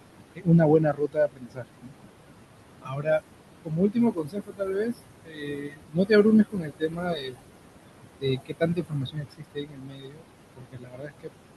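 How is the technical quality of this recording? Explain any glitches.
The recording has two related problems, both from an aggressive noise suppressor working against a fairly noisy room, where the background sits only about 11 dB below the speech.

Noise suppressor artifacts run the whole length. The suppressor pulls down any band it judges to be steady noise, frame by frame, cutting it by about 21 dB. Because it's making a fresh decision every frame, the leftover background pumps: it sinks in the gaps and swells back under the talking.

Speech cut by the noise suppressor happens seven times: 0.35 to 1.93 s, 2.82 to 3.22 s, 3.65 to 4.97 s, 5.25 to 6.11 s, 6.52 to 7.4 s, 8.21 to 10.25 s, and 10.56 to 11.32 s. In these stretches the suppressor mistook parts of the speech for noise and turned them down with the background, by about 22 dB at worst (about 20 dB in the short one around 3 s). 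Within each stretch, somewhere between a few hundred milliseconds and a second and a half gets hit, so quiet consonants and word endings come out swallowed or faint.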